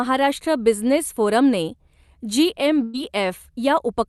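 A burst of packet loss at 2.83 to 2.96 s: about 100 ms of speech never arrived, so the receiver stretched and faded the last sound before resuming further on.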